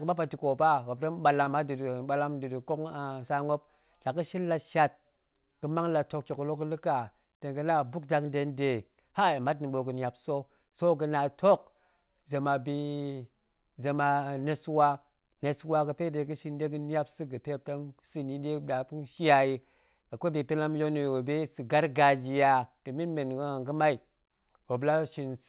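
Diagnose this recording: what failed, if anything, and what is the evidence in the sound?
A short stall from a late packet occurs in the network and jitter-buffer stage at 1.44 to 1.49 s. A packet arrived late, the buffer ran dry, and the receiver stretched the last sound by about 21 ms before resuming at the same point. Nothing is lost, but playback then runs about 21 ms later. On a spectrogram, which shows no energy above 4 kHz as expected for narrowband call coding, the harmonics there run flat and smeared. The waveform shows repeated cycles.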